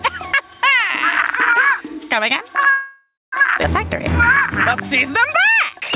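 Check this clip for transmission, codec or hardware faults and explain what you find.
Four faults are audible, plus the band limit of the call path, which has nothing above 4 kHz and fits G.711 A-law at 64 kbps.

Gain pumping runs throughout. The background swells in gaps and ducks by roughly 10 dB under loud sounds, likely from excessive gain hitting a fast limiter.

A call audio freeze runs from 2.71 to 3.34 s. Delayed packets likely emptied the jitter buffer. The last sound continues as a fading buzz, with about 0.23 s of silence, then resumes intact.

A skip ahead occurs at 3.62 to 3.66 s. Roughly 0.4 s of audio was dropped while later packets waited. Playback jumps forward with an almost direct join.

A jitter buffer slow-down spans 4.93 to 5.92 s. Repeated pitch periods add 55 ms, so the audio plays at 95% speed at unchanged pitch and sounds slightly drawn out.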